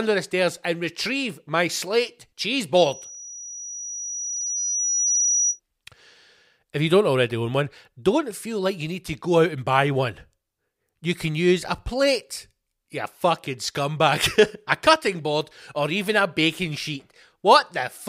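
From 2.76 to 5.6 s, after "retrieve my slate cheese", the microphone hears its own loudspeaker: loudspeaker feedback squeal, a 5.8 kHz tone swelling over roughly two seconds to speech level.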